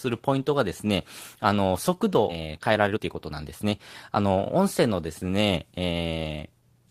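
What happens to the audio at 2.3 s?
Right at 2.29 to 2.31 s there's a skip ahead: about a second and a half of speech got dropped, so playback jumps forward with no gap.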